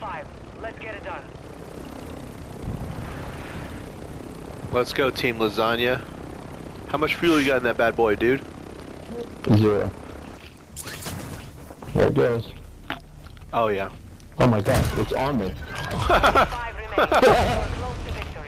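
A call bitrate drop from 10.26 to 12.29 s starves the encoder, so the sound turns rough and muffled, and a spectrogram shows the high band cut away.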